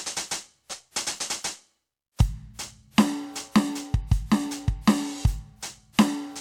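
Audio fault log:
No faults are heard anywhere in this music clip. Nothing in the audio calls for an entry in the log.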